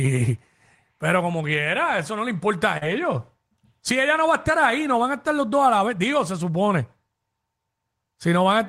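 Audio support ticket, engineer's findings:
Short concealed packet loss, 2.77–2.83 s, right after "eso no le importa". About 40 ms of audio never reached the decoder in time. The receiver's concealment extended the preceding sound to fill the gap, then crossfaded back, giving a brief smear.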